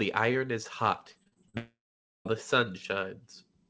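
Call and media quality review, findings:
Repeated packet loss (robotic sound), 1.12–1.55 s, right after "iron is": choppy stretch with six short holes, the longest 41 ms. The jitter buffer patches each one by stretching the last sound, so about 40% of that span is filler.

1.57–2.27 s: the sound smears into a fading buzz, then goes silent for about 0.49 s before resuming with roughly 0.68 s gone. Likely a long network dropout with concealment running out.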